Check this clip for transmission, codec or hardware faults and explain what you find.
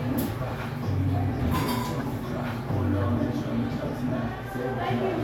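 Two corrupt frame decoded faults occur in this everyday-sound recording, at 2.00 s and 3.02 s. In each, flipped bits reached the decoder, which played the damaged frames anyway. Misread gains and codes put energy at wrong frequencies, giving a brief chirp-like blip. The first peaks near -25 dBFS, and its length points to a few frames. The second, quieter at about -30 dBFS, suggests a couple of frames.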